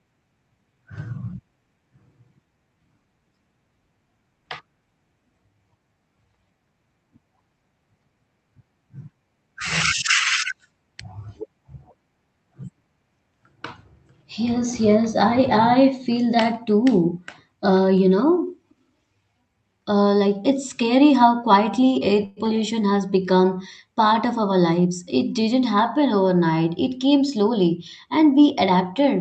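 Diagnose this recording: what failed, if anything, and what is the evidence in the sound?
Call audio freeze, network stage: after "quietly air", 22.25–22.39 s holds a fading 112 ms buzz, likely from packets delayed until the jitter buffer emptied. On a spectrogram it shows as smeared, decaying horizontal bands.

Skip ahead, network or jitter buffer: at 22.45–22.47 s roughly 70 ms of audio vanishes. The waveform splices directly across the jump, and the spectrogram shows an abrupt discontinuity with almost no gap.

Jitter buffer speed-up: after "part of", 24.37–25.03 s plays 8% faster at unchanged pitch as about 70 ms is trimmed. The waveform shows whole pitch periods removed, and harmonics stay level on an 8 kHz-limited Opus spectrogram.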